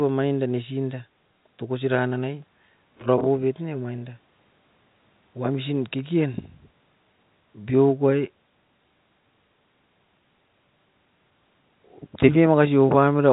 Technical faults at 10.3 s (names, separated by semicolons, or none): none